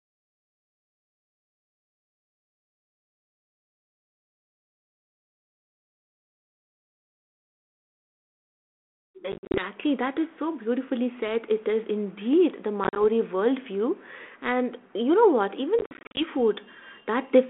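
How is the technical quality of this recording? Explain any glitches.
The recording has three bursts of packet loss on an ADPCM call, at 9.32–9.64 s (just before "that is so beautifully"), 12.84–13.03 s (after "is indeed the") and 15.79–16.24 s (after "you know what"). It runs over a narrow telephone band of about 250 Hz to 3.4 kHz with light coding grain, which points to 32 kbit/s G.726 ADPCM. In each burst, roughly 70 to 210 ms of packets went missing in runs up to 50 ms, scattered over 120 to 380 ms, and were filled with silence. The decoder's adaptive predictor and step size then no longer matched the sender's. You hear hard-edged gaps, and the sound returns slightly distorted before recovering within tens of milliseconds.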